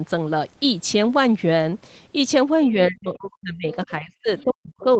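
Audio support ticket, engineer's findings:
Talker's speech drops out, roughly 40 dB down, 2.72–3.67 s and 3.85 s to end: speech suppressed in double talk, likely echo canceller turning down both sides during overlap.

Faint second voice, about 20–25 dB under the talker, 3.73–3.87 s and 4.39–4.43 s: other side's voice leaking through, likely loudspeaker echo the canceller didn't fully remove.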